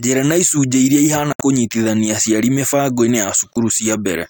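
Speech with two brief silent holes, at 1.33–1.41 s and 3.53–3.57 s, likely a Bluetooth dropout. Speech resumes further along rather than where it stopped, so material is skipped, not delayed.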